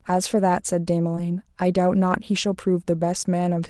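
This is a speech recording carried over an Opus call path, with the upper band stopping near 12 kHz. Between 1.15 and 1.26 s there is short concealed packet loss. About 20 ms of audio failed to arrive in time, and the decoder bridged 12 ms of it by extending the preceding sound before blending back, adding roughly 10 ms. The result is a brief smear or wobble. Inside that stretch, from 1.17 to 1.19 s, a lost packet was rebuilt from error correction. The gap is filled with a 20 ms low-bitrate copy that sounds rougher and noisier than the audio around it, which points to a single lost packet recovered by in-band forward error correction.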